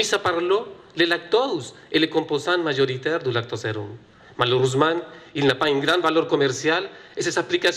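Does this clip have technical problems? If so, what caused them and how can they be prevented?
Yes. Throughout the clip the audio sounds dull, with a gurgling, granular roughness as upper bands drop in and out. That points most likely to MP2 compression at a starved bitrate, which fits roughly 80 kbps. Unlike a plain low-pass filter, the top end flickers rather than cutting off cleanly. Encoding at a higher bitrate, or with a more efficient codec, would prevent it.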